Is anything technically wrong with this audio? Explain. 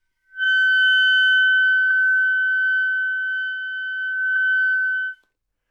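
Yes. Repeated frames occur at 0.43, 1.90 and 4.35 s. Each time, a 26.1 ms block, which fits one compressed frame, plays twice, causing a brief stutter and adding 26.1 ms.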